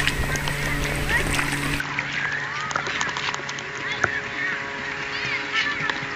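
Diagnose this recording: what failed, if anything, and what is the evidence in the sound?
From 1.80 s the sound abruptly dulls, with nothing above 7.4 kHz and no gap or level jump: likely the driver's input switched to a poorer device.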